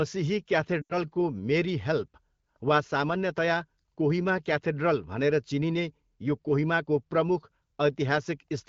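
Radio errors corrupted a short run of AMR speech frames in this speech recording, and the wideband decoder concealed them by repeating the last good pitch and vocal tract settings at falling gain. From 0.81 to 0.97 s the sound smears, fades toward silence and returns briefly rough. The gap of about 80 ms fits four lost 20 ms frames, heard over light AMR-WB coding at 12.65 kbit/s.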